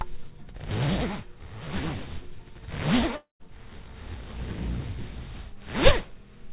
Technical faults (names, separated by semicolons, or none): long network dropout